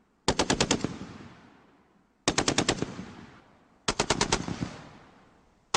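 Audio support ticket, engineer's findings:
No audible fault found on review; nothing to attribute to capture, processing or transport.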